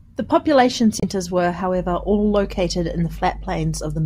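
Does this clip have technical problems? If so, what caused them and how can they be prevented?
Yes, there are two separate problems in this speech clip.

First, there's damaged data in a compressed stream from about 1.00 to 1.05 s, a short glitch of roughly 50 ms. Some bytes in the encoded file got lost or corrupted there, so the decoder couldn't make sense of those frames, lost its place and had to hunt for the next valid frame header, which comes out as a brief glitch. To prevent it, move files over reliable transfers and check them against checksums so corrupted copies get caught.

Second, mains hum comes in at about 1.74 s and runs right to the end: a steady 50 Hz tone sitting fairly high, roughly 15 dB below the speech. That's the power line leaking into the signal, most likely through a ground loop or a transformer close to the cabling. To prevent it, keep everything on one grounded outlet, use balanced cables or a ground-lift DI, and route audio lines away from power supplies.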